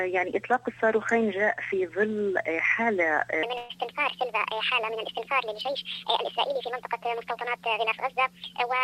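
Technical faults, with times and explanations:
3.43 s to the end: section at the wrong speed. From this point the audio runs 1.48 times too fast, so pitch rises about seven semitones along with the tempo. The likely cause is playback against the wrong clock. Unlike a pitch shift, timing and pitch change together here.
3.57–3.71 s: burst of packet loss. About 120 ms of audio never arrives, and the receiver covers 116 ms by extending the last sound and fading it, giving a held, dimming tail before playback resumes further on. The gap is filled rather than silent, which sets it apart from a plain dropout.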